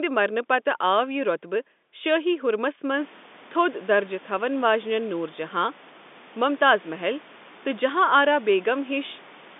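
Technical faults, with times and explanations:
No technical faults are present; the speech comes through a telephone line band of about 200 Hz to 3.6 kHz, and the room's background noise rises by about 25 dB at around 3 s to settle about 26 dB below the speech.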